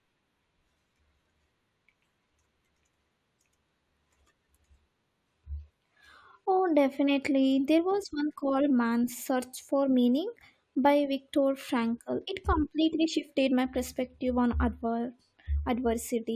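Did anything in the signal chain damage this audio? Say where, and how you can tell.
No, nothing in the chain did.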